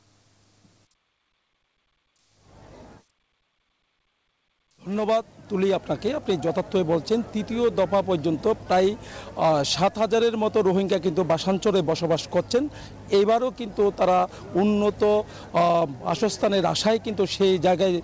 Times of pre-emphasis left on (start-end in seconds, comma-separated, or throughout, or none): none